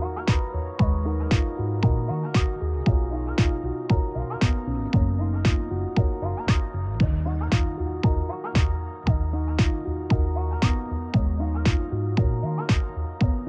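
Nothing stood out as a technical fault on listening to this recording.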